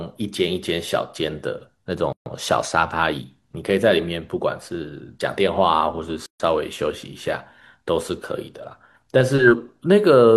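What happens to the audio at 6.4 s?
A gap at a join of encoded pieces runs from 6.26 to 6.40 s, about 139 ms of silence cut into the speech. Separately encoded pieces, joined every 4 s, kept their encoder start delay and end padding, so the speech stops abruptly with smeared edges, then resumes where it left off.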